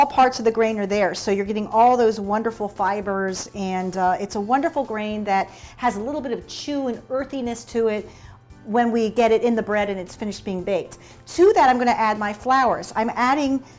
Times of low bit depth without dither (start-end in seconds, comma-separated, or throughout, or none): none